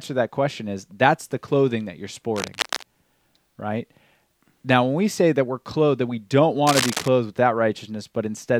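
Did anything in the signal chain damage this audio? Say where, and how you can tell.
Yes. Scratchy, uneven bursts sit over the speech at 2.36 to 2.85 s and 6.67 to 7.08 s, the second louder. This is cable scratch noise, likely from a worn lead or connector shifting in the analogue wiring.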